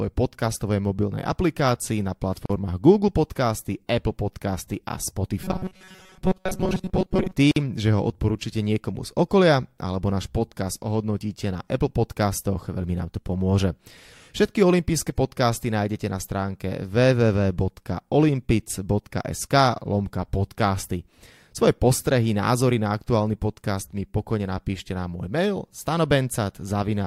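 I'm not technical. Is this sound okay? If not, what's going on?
No, there are two problems. First, a gap at a join of encoded pieces: right after "aplikácii na", at 2.46 s, the speech drops out for about 40 ms, and again at 7.51 s for about 50 ms. Each gap is a brief hole where separately saved chunks were stitched together with their leftover silence still in.

Between 5.44 and 7.33 s the voice turns buzzy and metallic, with a flat hum at 188 Hz. That's likely robotic sound from repeated short buffers: tiny slices of roughly 5 ms get replayed over and over while most of the real audio in that stretch is skipped.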